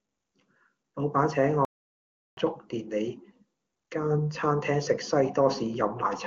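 At 1.65 s the speech stops dead in mid-flow. Silence holds until 2.37 s, a gap of about 0.72 s. Then the speech resumes. This is a playback stall. The player likely ran short of data, or its output thread was held up, so nothing reached the output until it recovered. The cut is abrupt at both edges. It sounds like a sudden dropout rather than a natural pause. The HD Voice coding around it stays clear.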